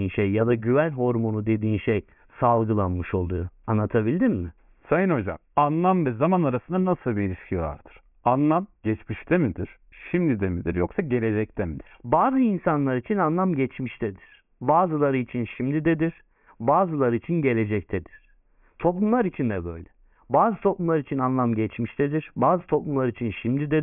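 Speech, and nothing in it is technically wrong.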